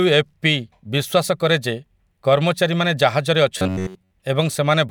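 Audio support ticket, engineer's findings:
Input starved at 3.58–4.11 s, likely with playback filling gaps by looping the last buffer; most real audio is skipped. Robotic sound from repeated short buffers: rigid metallic buzz at 93.8 Hz, which fits a 10.7 ms loop, loosely tracking the speech.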